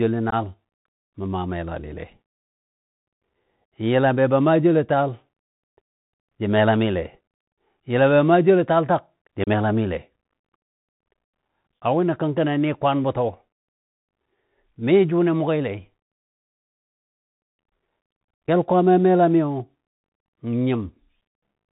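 From the start the speech carries the Bluetooth CVSD headset codec. The sound is hard-limited below 4 kHz, which fits a 64 kbit/s CVSD link. Each sample is coded as a single up-or-down step whose size adapts, so fast, loud high-frequency energy outruns the step and smears into distortion. Sibilants turn scratchy, and a granular hiss sits under the speech for the whole clip.

Unconcealed Bluetooth headset packet loss cuts three abrupt holes into that signal. The first runs from 0.30 to 0.34 s, the second from 9.44 to 9.49 s just after "joulo taal tak jə", and the third from 18.47 to 18.49 s. In each, a handful of short voice packets failed to arrive and were replaced by silence or an idle pattern rather than concealed. The speech resumes briefly quieter as the CVSD step size rebuilds.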